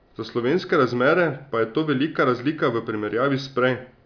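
Nothing goes wrong anywhere in this bit of speech, so there's no technical fault to point to.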